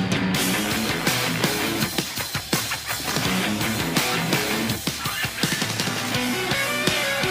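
Nothing stood out as a technical problem on listening.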